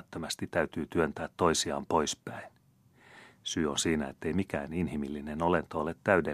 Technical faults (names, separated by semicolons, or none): none